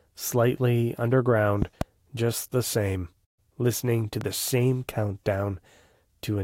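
At 1.62 to 1.84 s, a loud pop sounds as two sharp thumps standing well above the speech, which carries on underneath. A single, smaller pop follows at 4.21 to 4.24 s. Each is likely a voltage step from a plug, switch or static. On a waveform it appears as a tall spike, and on a spectrogram as a thin full-band vertical stripe.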